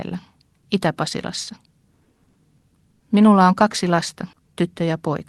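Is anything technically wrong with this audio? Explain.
Yes, there are two faults.

From 1.95 to 3.03 s there are repeated stalls (stutter). Packets reached the receiver late eight times, so its jitter buffer ran dry and it kept extending the last sound to cover each wait, about 250 ms in all and 23% of that span, with the longest hold at 100 ms. Nothing is lost, but the speech drags and hiccups. On a spectrogram, short stretches of smeared, repeated harmonics interrupt the normal patterns. The waveform shows repeated cycles, and the longer holds fade in level.

From 4.35 to 4.55 s, just after "on kaksi lasta", a jitter buffer slow-down stretches the audio by 40 ms, so it plays at about 84% speed with the pitch unchanged. The receiver was building up its reserve by duplicating single pitch periods many times in a row, which draws the sounds out. The waveform shows identical periods repeated back to back. 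On the spectrogram, the harmonics stay at the same height but run longer and flatter.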